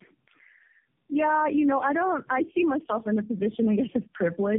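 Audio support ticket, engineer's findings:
Tandem speech coding throughout: call likely crossed several narrowband links, decoded and re-encoded at each, consistent with four low-rate coder passes (G.729A, AMR-NB type). Each pass compounds prior damage. Speech rough, noisy, muffled and warbly; nothing above 3.2 kHz.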